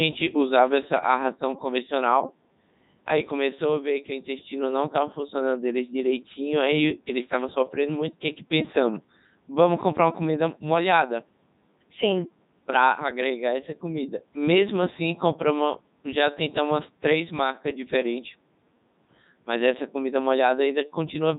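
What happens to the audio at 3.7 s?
At 3.7 s the speech carries the Codec 2 vocoder damage heard across the whole clip. The decoder rebuilds the voice from sine waves using only pitch, voicing, energy and a spectral envelope, giving a robotic buzz. Its heavy damage fits a 3.2 kbit/s mode. Unlike a waveform codec's swirly artefacts, the original waveform is gone entirely.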